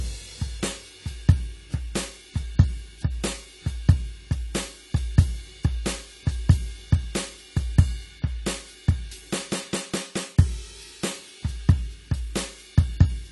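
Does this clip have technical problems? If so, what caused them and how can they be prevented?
Yes, the music sounds dull and warbly throughout, with nothing above 11.5 kHz, likely from AAC compression at a starved bitrate, about 32 kbps. Encode at a higher bitrate to avoid it.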